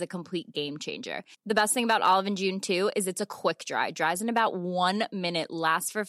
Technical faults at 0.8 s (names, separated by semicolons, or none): none